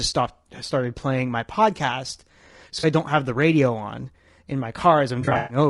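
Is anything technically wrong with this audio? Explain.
Yes, two problems. Throughout, the speech sounds rough and grainy, with a hiss filling the gaps between harmonics and a thin, synthetic top end. That's likely low-delay AAC compression, AAC-ELD at something around 32 kbps, where short frames can't resolve pitch detail well.

Then there's AAC frame loss with concealment. At 2.79 to 2.85 s, just before "I don't have the", about 40 ms goes missing and the decoder patches it from the last good spectrum, leaving a brief smeared, phasey blip. From 5.21 to 5.57 s it's worse: about 200 ms lost across roughly 280 ms, the longest gap around a tenth of a second, so the sound decays and fades back unevenly.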